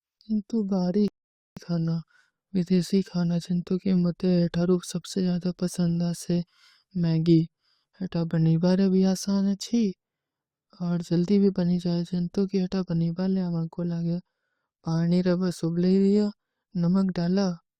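At 1.08 s a rebuffering stall cuts the speech to silence for about 0.49 s; it resumes at 1.57 s where it stopped, showing a flat waveform gap and blank spectrogram.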